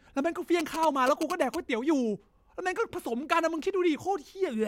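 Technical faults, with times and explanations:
0.60 to 1.56 s, GSM signalling bursts: for about a second you get that galloping dit-dit-dit of short buzzes sitting roughly 10 dB under the speech. A 2G phone close by was handshaking with its network, and the audio circuitry rectified those radio bursts into sound. The buzz pitch sits near 217 Hz because that's the rate the phone pulses its transmitter.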